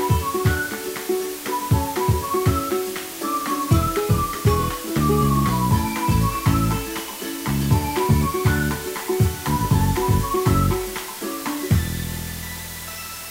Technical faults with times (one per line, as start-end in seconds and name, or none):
0.00-13.30 low bit depth with dither